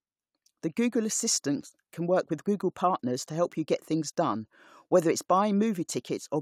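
No technical faults can be heard anywhere in the speech recording, with the signal holding steady throughout.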